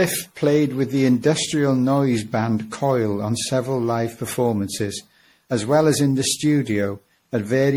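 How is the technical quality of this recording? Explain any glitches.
The technical quality is compromised by two faults that run through the whole speech clip.

Sample clock jitter: The converter's clock wavers by a few microseconds, so each sample lands slightly off its proper instant. The timing error scales with how fast the waveform is changing, leaving a rough hiss roughly 35 dB below the signal that swells on loud, bright passages and disappears in pauses.

Generation loss: The audio was likely decoded and re-encoded through an MP3 codec several times, each pass quantising on a shifted frame grid. The errors compound, so the speech sounds swirly, smeared and hollow, with blurred consonant attacks, more damaged than a single 64 kbit/s encode would explain.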